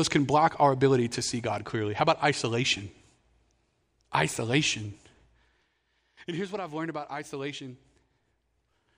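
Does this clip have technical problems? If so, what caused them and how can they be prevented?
No, nothing in this speech clip points to a technical fault, so there is no cause to trace and nothing to prevent.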